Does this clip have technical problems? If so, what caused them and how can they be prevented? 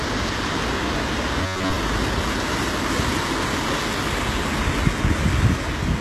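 Yes. The whole clip has a gritty, metallic top end that stops dead at 12.3 kHz, likely HE-AAC compression at a low bitrate, around 16 kbps, rebuilding the treble from copied lower bands. Giving the encoder more bitrate, or using plain AAC or Opus at a comfortable rate, would fix it.

From 1.41 to 1.76 s, most of the sound turns into a rigid buzz at about 94 Hz, likely robotic sound from repeated short buffers, each around 10.7 ms long, looping while real audio went missing. Larger or better-fed playback buffers, or a sturdier network path, would stop it.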